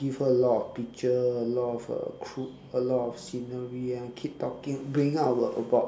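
No technical fault can be heard anywhere in this speech recording. No moment in it stands out as needing comment.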